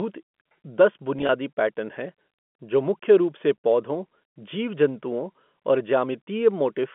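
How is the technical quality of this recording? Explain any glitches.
The recording has one glitch, a brief packet loss with pitch repetition. It comes through a telephone-band channel of about 200 Hz to 3.4 kHz, which matches G.711 telephone coding.

From 1.19 to 1.29 s, just before "पैटर्न हैं जो मुख्य", about 50 ms of audio is missing in short gaps across 100 ms. The longest gap is 20 ms. The receiver fills each gap by repeating the last pitch period, so the sound briefly takes on a held, buzzy quality.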